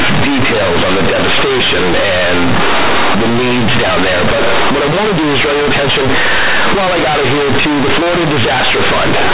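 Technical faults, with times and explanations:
Throughout, companded audio read as linear: the mu-law telephone bytes are played back as plain 8-bit samples and are never expanded. The logarithmic code is taken at face value. Every sign change throws the output across about half its range. Quiet speech comes out as large as loud speech, and the waveform is badly bent. The result is very loud, buzzy distortion, with heavy noise filling the pauses instead of silence.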